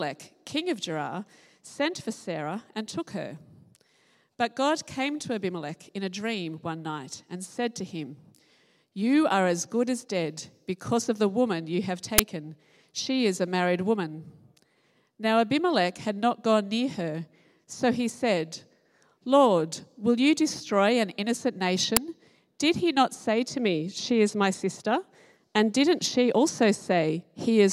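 Two uninitialised buffer bursts hit this audio at 12.18 s and 21.97 s: blocks of leftover memory, about 10 ms and 5 ms long, played as loud noise rather than the silent gap of a dropout.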